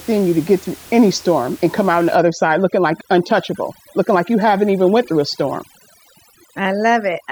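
From 2.16 s, right after "come out on the", and running to the end, overdone noise removal sets in: the suppressor cuts individual frequency bands near its noise estimate, so the room noise, about 23 dB below the speech, drops and breaks into twinkling specks while quiet speech detail vanishes.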